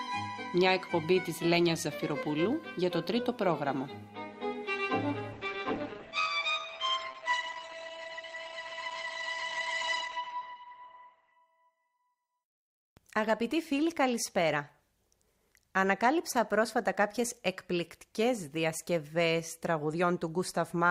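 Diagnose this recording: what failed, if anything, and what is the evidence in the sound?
Adaptive stream at a lower bitrate, 5.32 to 11.32 s, network stage: treble suddenly thins and codec artefacts rise without a gap, which fits a drop to a far lower rate.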